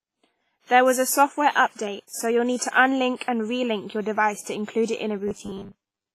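Throughout the speech there is heavy codec damage, likely from WMA compression. Nothing is present above about 15.4 kHz, which fits a low bitrate near 24 kbps. The transform coder spreads its quantisation noise across long blocks and drops weak detail. The result rings and sounds washy, with hiss that rises and falls with the speech.

Pre-echo appears twice just before "and relink your device": from 3.17 to 3.21 s and from 3.23 to 3.28 s. Each smear lasts about 45 ms. A sharp onset sits late in a coding block. The noise sized for that loud onset also fills the quiet stretch before it. You hear a brief hiss ahead of each attack, and the attacks sound softened.

From 5.28 s to the end at 6.15 s, just after "it in", there is a robotic sound from repeated short buffers. New audio is arriving too seldom. The playback fills the gaps by replaying the last short chunk, so roughly half the material is repeats. 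The buzz sits at 100 Hz, which points to a 10 ms buffer. The speech becomes a rigid, metallic drone that only loosely follows the original.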